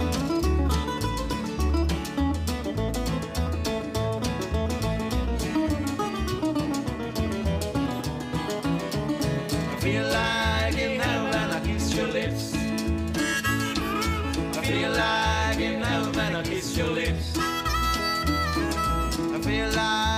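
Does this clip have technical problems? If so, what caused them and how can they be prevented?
No, this clip has no technical problems, so there is nothing to trace to a cause or prevent.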